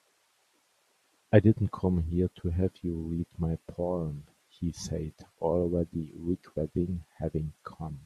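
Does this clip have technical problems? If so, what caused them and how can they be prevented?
No, no technical problems can be heard here.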